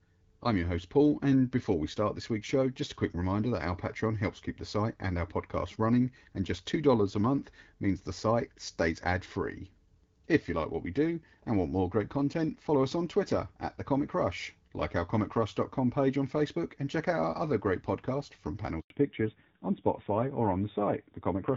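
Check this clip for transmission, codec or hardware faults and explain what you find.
Two faults, both right near the end, and they're linked. The call drops out briefly and then comes back sounding noticeably thinner.

The first is a handover gap, from 18.80 to 18.90 s, lasting 100 ms. The phone switched the call over to a different network link, and no speech frames made it through during the switch. The speech cuts off almost instantly and there's a short dead silence before audio resumes. Whatever was said in that tenth of a second is simply gone.

The second is a fallback to narrowband, starting at 18.90 s and running to the end of the clip. Before the gap, the call sounds like HD Voice with light coding, which fits AMR-WB at around 12.65 kbit/s. After the handover, the new link is carrying an older narrowband codec, and the rougher texture points to AMR-NB at about 7.4 kbit/s. Nothing above 4 kHz survives, so sibilants lose their crisp top end and the speech turns dull and boxy.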